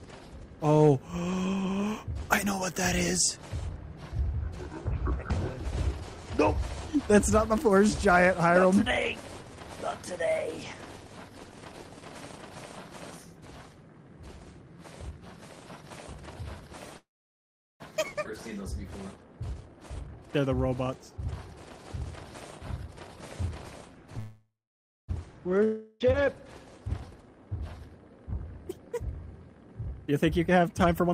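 At 16.97 s the sound stalls for about 0.83 s: a brief fading buzz, then 0.76 s of silence, before it resumes where it stopped. That's a call audio freeze, likely from delayed packets draining the jitter buffer.

Right after, at 18.24 s, a skip ahead jumps forward with almost no gap, losing roughly 0.4 s.

From 19.42 to 21.37 s a jitter buffer speed-up runs things 21% fast at the same pitch, trimming roughly 0.4 s to catch up.

Another call audio freeze hits at 24.19 to 25.10 s, about 0.89 s with 0.58 s silent. Again it's likely the buffer running dry while packets were held up.

Then 25.64 to 26.02 s is a long network dropout, likely lost packets. The last sound is stretched into a fading buzz for 0.36 s, and 0.36 s of audio never returns.

The speed-up comes back twice more: 27.15 to 27.47 s at 13% faster, and 29.81 s to the end at 40% faster, shaving about half a second.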